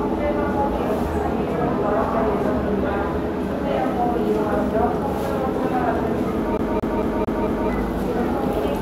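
At 6.57 s the audio gets caught in a CD stuck on one turn, looping the same 0.22 s chunk five times until 7.70 s. A scratch keeps knocking the laser back a track each rotation, so you hear that quick, even stutter with a tiny dropout at every jump.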